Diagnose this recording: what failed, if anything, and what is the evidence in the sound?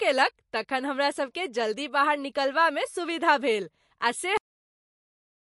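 MP3 compression, throughout, at the codec stage: plainly audible codec damage and nothing above 11.3 kHz, likely an encoder starved of bits, which fits about 48 kbps.

Cut-off end at 4.37 s, at the buffer or storage stage: the speech stops mid-sound right after "सुविधा भेल आ से" and falls to silence with no decay, because the final buffers were never written.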